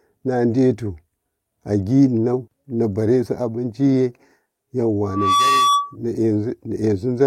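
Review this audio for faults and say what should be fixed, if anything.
Skip ahead at 2.47 s: playback jumps forward with no gap, and roughly half a second of speech never arrives. The two sides of the jump are butted together, so the sound lurches rather than pausing. This happens when the receiver discards a stretch of audio, here about half a second, while later audio is already queued, usually because the jitter buffer overflowed. The listening delay drops by about the same amount. To prevent it, size the jitter buffer to absorb bursts, and let it shed excess delay gradually instead of all at once.

Jitter buffer speed-up from 2.57 to 3.73 s: right after the jump, the speech runs about 10 percent fast at unchanged pitch and sounds hurried. The buffer was still holding more audio than its target, so the receiver trimmed short pitch-period-length pieces again and again, removing roughly 150 ms in total to pull the delay back down. 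To prevent it, stabilise packet delivery so delayed packets don't pile up, and cap how aggressively the buffer compresses.

Loudspeaker feedback squeal from 5.06 to 5.96 s: a steady tone at 1.2 kHz swells over about a third of a second and settles at about 5 dB above the speech before it stops. The microphone is picking up the loudspeaker it drives, and at 1.2 kHz the loop gain exceeds one, so that frequency feeds itself and grows. To prevent it, lower the loudspeaker gain or move the microphone away from it, and use echo cancellation or a notch at 1.2 kHz.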